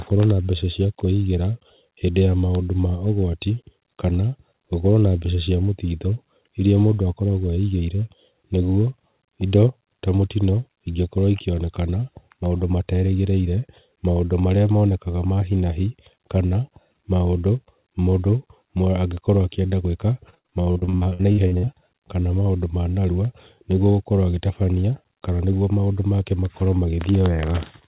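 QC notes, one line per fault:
20.3–21.69 s, repeated packet loss (robotic sound): a rapid string of short dropouts, the longest about 61 ms, leaves nearly half the span patched by extending the preceding sound, giving a choppy texture with pieces missing over narrowband audio with nothing above 4 kHz.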